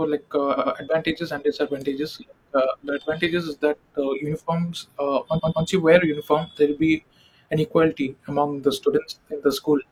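A run of compressed frames was written more than once in two places, producing repeated frames that the decoder plays again. From 0.53 to 0.70 s a block of about 85 ms, which fits two frames, sounds twice more, a quick stutter. From 5.36 to 5.61 s a 128 ms block, consistent with three frames, repeats twice in the same way. The speech runs about 0.17 s and 0.26 s longer there.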